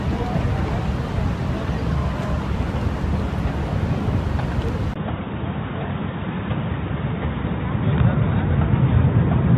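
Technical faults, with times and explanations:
4.94 to 9.57 s, input switched to a poorer device: after a brief gap of about 20 ms, the sound turns dull and boxy, drops about 5 dB, and gains a faint new background noise roughly 40 dB under the signal. The likely cause is a change to a narrower-band input that passes nothing above 3.8 kHz. On a spectrogram the upper region goes abruptly empty at that line, while the waveform shows a tiny gap and then a lower envelope.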